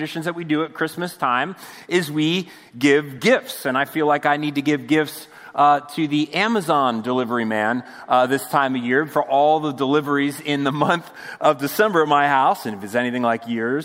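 No audible fault anywhere in the clip; nothing on the signal path calls for attention.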